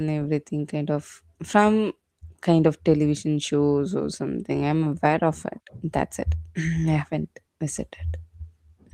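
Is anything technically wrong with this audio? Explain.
No, nothing here is actually wrong; the speech has simply gone through Opus voice compression at around 20 kbps in its hybrid, fullband mode, and the light coding traces that leaves are just what that setting normally produces.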